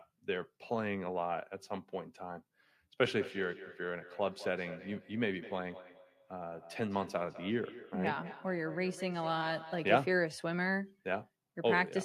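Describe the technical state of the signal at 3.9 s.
Feedback echo between two devices runs from 3.12 to 10.21 s: a second device replays the sound into this microphone, so repeats return roughly every fifth of a second, ringing thinner. Unlike room reverb, they arrive as distinct repeats.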